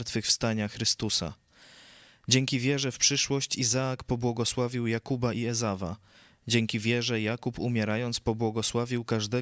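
Listening through this speech recording, nothing stood out as a technical problem at any point.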